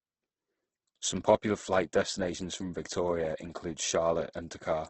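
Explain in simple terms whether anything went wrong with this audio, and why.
The speech sounds rough, grainy and somewhat muffled from start to finish, with nothing above about 8.2 kHz. This is most likely heavy Opus compression: when short of data, the encoder drops the highest frequencies and fills missing detail with noise.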